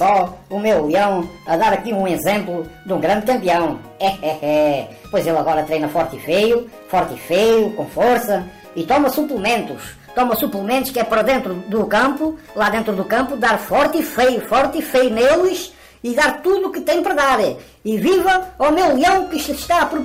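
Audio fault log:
Nothing to log here: listening all the way along, there's no fault to report anywhere in the clip.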